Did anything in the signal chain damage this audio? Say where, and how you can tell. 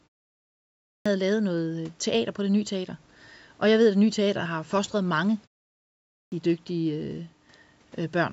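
Yes: a clipped start after a pause at playback. The output device sleeps in silence and swallows 0.47 s at 0.59 s, before "lavet noget øh teater", and 0.42 s at 5.9 s, after "teater har fostret mange".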